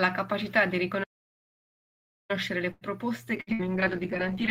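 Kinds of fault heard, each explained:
Playback stall: the speech halts at 1.03 s and stays silent about 1.26 s, likely a starved or blocked player; the waveform shows a flat gap until 2.31 s.
Short stall from a late packet: at 2.71 s one sound is held about 98 ms while a late packet arrives, nothing lost; spectrogram shows smeared, repeated frames.
Call bitrate drop: from 3.38 s to the end the bitrate falls from 32 to 10 kbps, making speech rough and muffled; spectrogram loses its upper band.
Burst of packet loss: at 3.41 s and 3.53 s, about 60 ms each goes missing, filled by the last sound continued and fading; spectrogram shows decaying, blurred patches before resumption.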